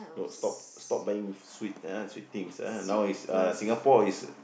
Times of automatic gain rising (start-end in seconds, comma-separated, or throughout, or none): 1.06-4.23